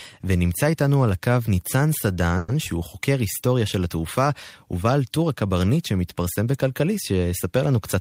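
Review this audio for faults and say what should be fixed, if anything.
From 2.37 to 2.50 s there is a call audio freeze. The last sound is held on as a fading buzz or hiss for about 110 ms, then the speech carries on exactly where it broke off. The likely cause is packets delayed in transit, draining the jitter buffer. Unlike a packet-loss dropout, nothing is cut out; the gap is inserted, so everything after it runs 110 ms late. A larger or adaptive jitter buffer on a steadier network path would prevent it.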